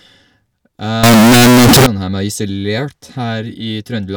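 From 1.03 s to 1.86 s the speech turns into a loud, harsh, near-square buzz at an almost fixed, high level, with background noise as loud as the talker. Pitch stays audible. This is float read as integer, likely 32-bit float samples decoded as 32-bit integers.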